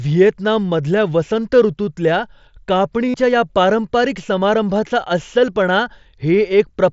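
From 3.09 to 3.14 s, a run of voice packets between headset and phone was lost, about 52.5 ms. The receiver filled the gap by repeating the best-matching recent waveform. This concealed Bluetooth headset packet loss sounds like a short buzzy tone held at full level, warbling slightly as real speech returns on "या पारंपारिक समारंभाचा अस्सलपणा".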